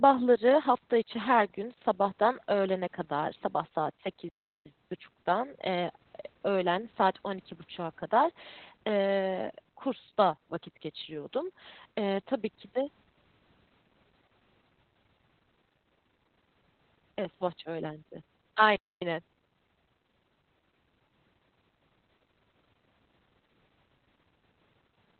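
Throughout the clip the speech carries heavy Opus voice compression. Nothing is present above about 4.3 kHz, so the sound is narrowband and muffled, with a hoarse, slightly robotic texture from the coarsely coded excitation. That points to the SILK linear-prediction coder running at a very low bitrate, around 8 kbps, where Opus cuts the band back to telephone width and spends few bits describing the voice's source signal.

At 4.29 s the audio drops to silence for about 0.37 s before resuming at 4.66 s. This is a playback stall, a sudden gap in mid-flow, most likely caused by the player running out of buffered data or its output thread being blocked until it caught up. A second, shorter stall follows at 18.76 s, cutting the sound for about 0.25 s until 19.02 s, with the same abrupt stop and restart.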